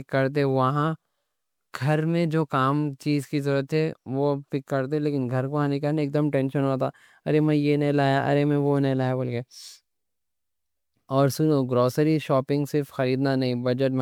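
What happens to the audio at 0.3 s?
Generation loss, running through the whole clip: the speech was likely decoded and re-encoded as MP3 about five times, each pass requantising on a shifted frame grid. It sounds swirly, hollow and smeared, with blurred attacks.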